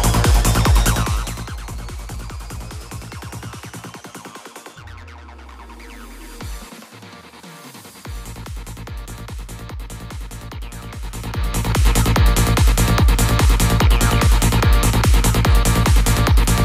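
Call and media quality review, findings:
Zipper noise at 0.84 to 1.58 s (fade down about 15 dB) and 10.96 to 11.89 s (back up about 15 dB): ticking rides the level move, 3 dB jumps at roughly seven a second. Likely an unsmoothed gain stage stepping per block, each jump clicking.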